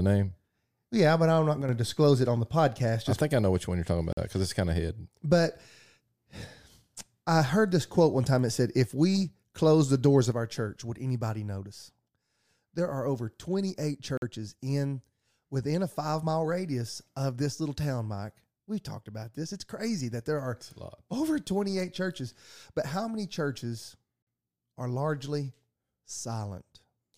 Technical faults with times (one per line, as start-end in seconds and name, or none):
1.62-1.69 one channel drops out
4.13-4.17 gap between chunks
10.32-27.18 one channel drops out
14.17-14.22 gap between chunks
24.22-24.27 gap between chunks